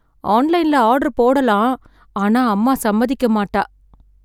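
Nothing is technically wrong with this speech recording, so there are no fault times or causes to give.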